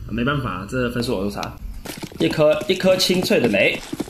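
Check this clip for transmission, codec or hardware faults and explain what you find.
Two kinds of fault are present: a short stretch of comb filtering at the start and two brief decoder glitches later on.

From 0.0 to 1.0 s there is channel delay (comb filtering). One channel runs behind the other by under a millisecond, and when the two are summed to mono, shared content cancels at regularly spaced frequencies, the first near 700 Hz. The result is a hollow, phasey colouring with fixed notches. Unlike a flanger, those notches never sweep.

At 1.58 s and again at 3.78 s there is damaged data in a compressed stream. Corrupted bytes make the decoder misread a frame, lose sync and search for the next valid header. Each event is a short chirp, click or brief hole lasting less than 20 ms, often with a skip forward.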